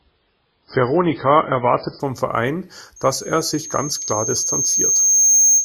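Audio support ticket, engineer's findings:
Adaptive stream starting at a low bitrate: 0 to 2.0 s, nothing above 5.3 kHz, dull and smeary speech, then a sudden jump in clarity with no gap. Fits the player opening on a very low MP3 rendition, around 16 kbit/s, then stepping up to roughly 128 kbit/s.

Loudspeaker feedback squeal: from 2.96 s to the end, a single 6.4 kHz tone swelling over a couple of seconds until it sits about 10 dB above the speech. Mic hearing its own speaker, loop gain over one at that frequency. Nobody breaks the loop.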